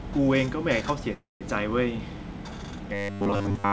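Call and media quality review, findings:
Call audio freeze, 1.14–1.43 s. Likely cause: packets held in transit, jitter buffer ran dry. Receiver extended the last sound as a fading fill, then about 170 ms of silence. Playback resumed where it stopped, so 267 ms of gap was inserted, nothing lost, and delay grew by 267 ms.

Robotic sound from repeated short buffers, 2.94–3.72 s, to clip end. Likely cause: audio arriving too seldom, player looping a 10 ms segment instead. The repetition imposes a rigid 100 Hz metallic buzz, and most of the real audio in that stretch is skipped. Band limit at 7 kHz fits a G.722 call codec.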